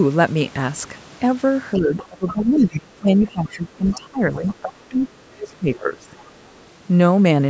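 An echo canceller likely left loudspeaker playback in the microphone signal, so the other side's voice leaking through is heard from 1.76 to 2.78 s, about 15 dB below the speech, then faintly at 3.26–3.49, 3.89–3.95, 4.36–4.73 and 6.18–6.64 s, between about 20 and 35 dB down. Overlapping talk likely confused the same canceller into speech suppressed in double talk from 1.76 to 6.12 s: roughly three seconds of the talker's voice dip, by as much as about 25 dB, within a call-processed band that stops at 8 kHz.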